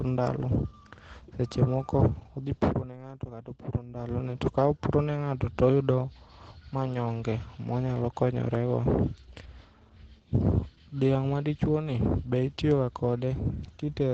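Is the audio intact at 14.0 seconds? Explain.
No. Opus voice compression runs throughout, including at 14.0 s. The SILK coder's coarse excitation, fitting roughly 12 kbps, makes the speech muffled and hoarse, and the spectrogram is empty above 8.6 kHz.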